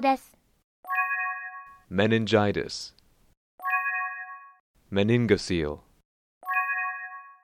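No audible technical faults are present anywhere in the audio.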